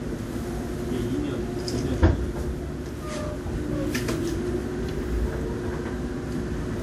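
A recording of everyday sounds, carrying generation loss across its whole length. The texture swirls and smears, with a hollow, phasey quality and softened attacks, and nothing is heard above 19.4 kHz. The likely cause is around ten successive lossy decode-and-re-encode passes, each requantising on a shifted frame grid so the noise and spectral holes pile up. The artefacts fit a WMA-type codec at 96 kbit/s. What sets this apart from a single low-bitrate encode is that a rate like that would sound far cleaner; the excess smearing and hollowness point to accumulated passes instead.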